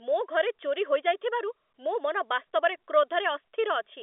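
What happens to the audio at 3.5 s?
Nothing goes wrong at 3.5 s: the audio is intact there, with the narrow telephone band of G.711 coding and no dropout, click or distortion.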